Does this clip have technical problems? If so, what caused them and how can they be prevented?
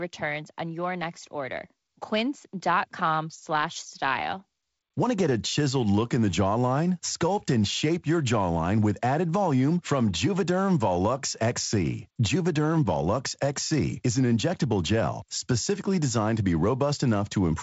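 No, the speech passes through G.722 wideband telephone coding at 48 kbit/s with content ending near 7.7 kHz, as expected for that path, so there is nothing to prevent.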